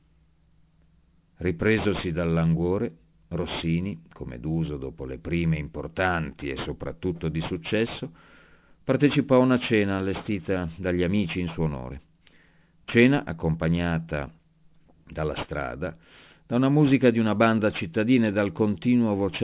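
A speech recording that was taken down from 48 kHz to 8 kHz without an anti-aliasing filter first shows aliasing throughout. Everything above the new 4 kHz limit folds back below it at unrelated pitches, roughly 20 dB under the speech, so sibilants turn gritty and metallic and the spectrum stays full right up to the band edge.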